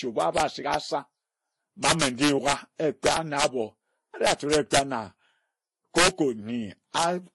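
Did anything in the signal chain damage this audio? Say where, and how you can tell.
Yes. Integer overflow at a gain or sample-format stage: peaks about 3 to 6 dB over full scale wrap to the opposite sign instead of limiting. Loud speech cracks violently at 0.22–0.74, 1.85–2.53, 3.06–3.44, 4.27–4.79, 5.98–6.08 and 6.98–7.03 s.

At the codec stage, the likely cause is transcoding between lossy codecs, an MP3 encode followed by a Vorbis one, both at low bitrates. Nothing remains above 11.4 kHz, and the artefacts of two different encoders are heard together throughout.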